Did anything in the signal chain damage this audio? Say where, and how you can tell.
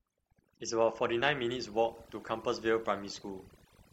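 Yes. Overdone noise removal in the call processing stage, throughout the speech. In the gaps the background drops away into twinkling specks. Frequency bands near the noise estimate were cut.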